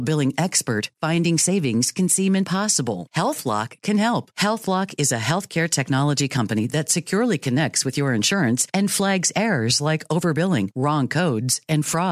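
A speech recording with no technical faults to be heard anywhere in it. Nothing in the audio needs a timestamp or an explanation of cause.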